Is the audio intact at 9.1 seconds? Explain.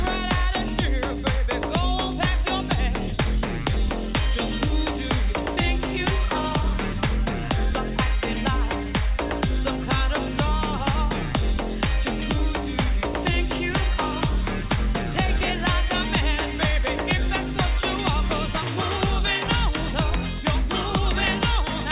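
Yes, the audio at 9.1 seconds is intact, with nothing there beyond the normal band-limited sound of a G.711 A-law call path, which carries nothing above 4 kHz.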